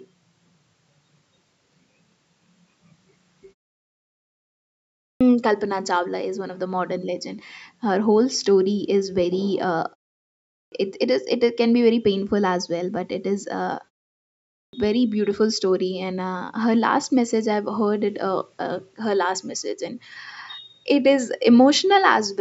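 At 4.97 s, 10.48 s and 14.50 s, the output device appears to drop into a sleep state during silence and then needs time to wake and lock again, producing a clipped start after a pause. Each time, about 0.24 s of sound is swallowed after pauses of 1.51 s, 0.61 s and 0.68 s, so speech bursts in abruptly from silence with its opening sounds missing.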